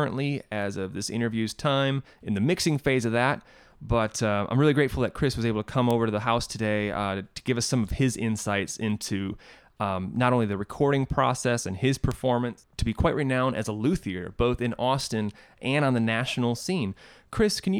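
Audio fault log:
5.91 s, 12.12 s, 15.01 s, bit error spike: a single flipped bit in stored or transmitted data pushes a sample value off by a power of two and it snaps straight back. At 5.91 s and 15.01 s the jump sounds like one isolated sample; at 12.12 s it sounds like a run of about three. Each is a sharp broadband tick, peaking at about −10 dBFS, then about −16 dBFS twice, with no relation to the surrounding audio.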